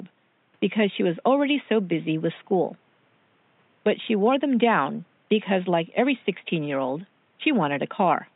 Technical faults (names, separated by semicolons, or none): none